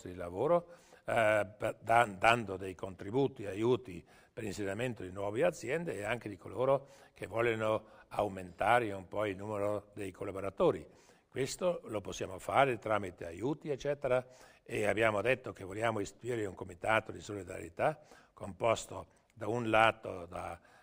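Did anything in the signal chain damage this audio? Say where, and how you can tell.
Yes. Imaging from linear upsampling, at the sample-rate conversion stage, throughout: a dulled top end and faint mirrored content between 12 and 24 kHz, consistent with a 24 kHz source interpolated to 48 kHz.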